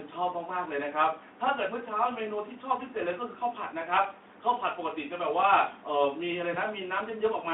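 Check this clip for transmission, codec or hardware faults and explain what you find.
One transmission fault appears near the end of the speech. From 6.53 to 6.58 s there is a brief smeared patch where the sound thins out and then recovers. This is VoIP packet loss concealed by the speech codec. About 20 ms of audio went missing, and the decoder filled the gap by extending its last pitch and spectral shape at falling gain. The effect lingers a little past the gap because each decoded frame depends on the one before it. The Speex coding itself, on a telephone-width band of roughly 250 Hz to 3.5 kHz, adds only light roughness.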